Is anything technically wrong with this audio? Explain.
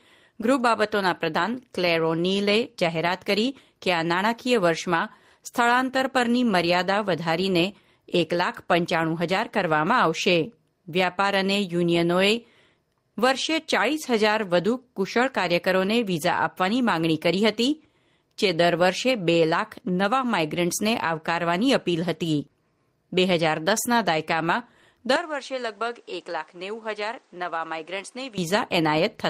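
Yes, there's one problem. From 25.16 s to 28.38 s the speech suddenly gets duller and quieter, about 10 dB down, with nothing above 9.6 kHz, then clears up again. It's likely the input switched to a poorer device: the system jumped to a different microphone or headset path with a narrower band, its own tone and its own background noise, which sits well under the speech. The change happens instantly, with no silence at the switch.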